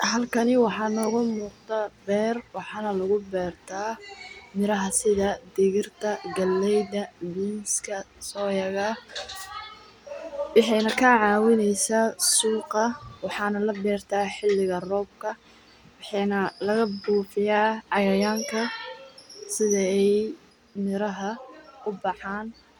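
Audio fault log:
20.50–22.79 s, sudden gain jump: speech and background noise drop together by about 4 dB in one step, likely a gain change applied without a ramp.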